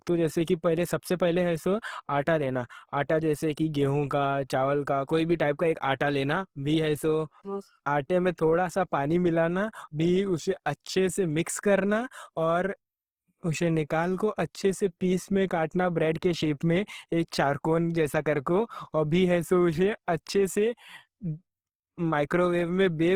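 Throughout, the speech is grainy and rough, with noisy harmonics and bandwidth reaching about 20.2 kHz: likely Opus compression in CELT mode, fitting roughly 16 kbps.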